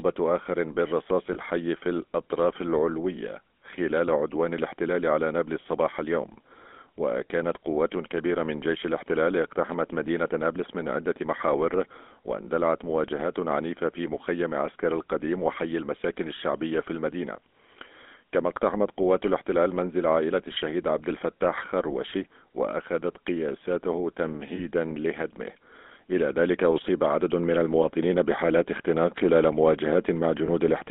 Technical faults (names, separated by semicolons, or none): GSM full-rate codec; lost GSM frames